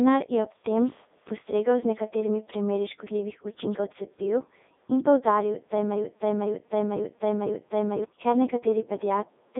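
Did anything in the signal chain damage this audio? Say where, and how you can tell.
Yes, at the codec. The Codec 2 vocoder buzzes robotically throughout, within 250 Hz to 3.7 kHz, fitting 3.2 kbit/s. The speech is rebuilt from sine waves.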